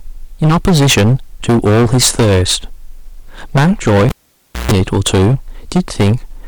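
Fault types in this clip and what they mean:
Hard clipping: The speech has a harsh, fuzzy edge on every loud syllable all the way through, not just occasional crackle. The level is driven about 16 dB past what the stage can pass, so peaks are sliced flat, and a large share of the waveform, around one sample in seven, sits against the ceiling. Those squared-off tops add strong high harmonics that smear across the upper spectrum.
Cable pulled and plugged in: At 4.09 s a sharp pop cuts the speech off, and the sound drops to near silence for about 0.58 s. Within that gap comes a short burst of mains buzz, roughly 0.14 s long, with its hum at 60 Hz. That is the plug's tip touching the socket before it seats fully. A second pop at 4.72 s marks the speech returning as a live lead is pushed back in.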